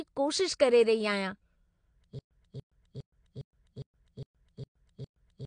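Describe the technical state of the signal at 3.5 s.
At 3.5 s the signal is inside a stutter with silent gaps that runs from 2.19 s to the end. The same 289 ms fragment plays, drops into about 119 ms of dead digital silence, then returns, cycling every 408 ms, eight times in all. The likely cause is a stalled player re-sending its last buffer on each retry, so the audio for that stretch never arrives. The repeats are identical and the gaps are true silence, which separates this from a skip, where audio jumps ahead, or a dropout, where nothing repeats.

Throughout the clip, including the repeated fragment, there is AAC compression damage that is plainly audible. Nothing reaches above 9.8 kHz, so the speech sounds dull, and sibilants take on a smeared, fizzy texture where coarse quantisation has thinned the upper bands. This fits AAC-LC at around 32 kbps. The even loss of top end and the warbling are what mark it as codec coding rather than a simple low-pass filter, which would leave the remaining band clean.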